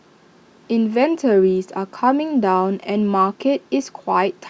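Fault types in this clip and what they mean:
No fault types are present in this clip, so there is nothing to explain about what they mean.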